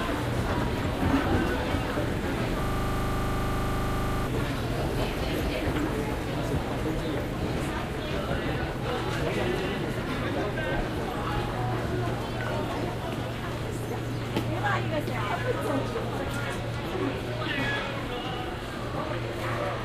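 From 2.64 to 4.27 s, a system hang loop repeats one 40 ms slice of sound 41 times. This produces a rigid 25 Hz stutter while the system is frozen.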